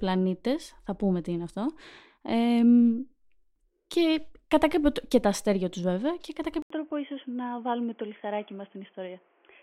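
Input switched to a poorer device at 6.62 s in this speech clip: after an 80 ms silence the sound turns dull and boxy, with nothing above 3.4 kHz, a few decibels quieter and a new faint background noise to the end, likely another microphone or a headset call profile.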